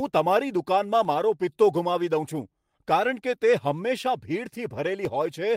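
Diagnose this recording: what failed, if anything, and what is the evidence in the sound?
Lost packet rebuilt from error correction at about 0.57 to 0.59 s, network and codec stage: one 20 ms packet went missing, and the decoder played the low-bitrate copy carried in the next packet, so the speech continues without a gap but briefly sounds rougher and noisier.

Periodic USB or driver dropouts from 1.05 s to 5.05 s, driver or buffer stage: tiny dropouts of about half a millisecond recur every 2.0 s, three or so in all, each filled with silence and heard as a regular tick within the speech.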